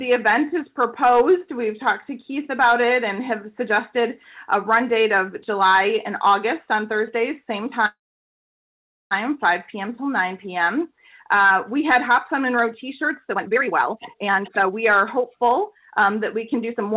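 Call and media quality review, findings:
Call audio freeze, 7.86 to 9.13 s. Sound stalls, briefly continues as a fading buzz or hiss, then goes silent for about 1.15 s. Playback resumes where it stopped. Nothing lost. Likely cause: delayed packets draining the jitter buffer. Latency grows by about 1.25 s.

Jitter buffer speed-up, 13.3 s to end. Audio runs hurried, about 131% speed, pitch unchanged. The receiver cuts short pitch-period slices repeatedly to shed the excess buffered delay. Roughly a second is removed. Band-limited to 4 kHz throughout, consistent with G.711 A-law at 64 kbps.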